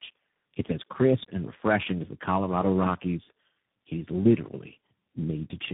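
Across the whole clip the speech shows tandem speech coding: it was decoded and re-encoded at each network border and passed through three separate speech codecs in a row, likely an AMR-type coder, then a G.729-style coder, then CVSD. Each stage compounds the damage of the last, so the voice sounds rough, muffled and warbly. Nothing survives above about 3.7 kHz.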